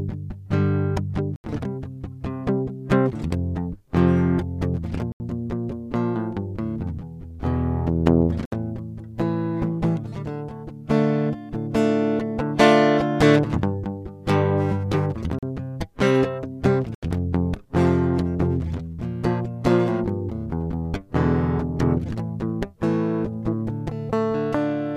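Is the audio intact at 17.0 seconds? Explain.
No, the music drops into an 80 ms hole from 16.95 to 17.03 s, a block of digital silence where samples became zeros.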